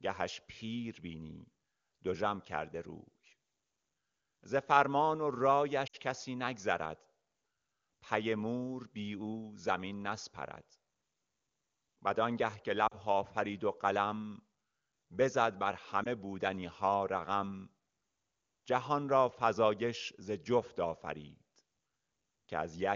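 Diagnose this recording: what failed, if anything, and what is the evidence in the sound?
Lost AMR speech frames at 5.87–5.96, 12.87–12.96 and 16.03–16.07 s: radio-network errors left brief warbling gaps, matching runs of three, two and one 20 ms frames, which the decoder concealed with fading extrapolation.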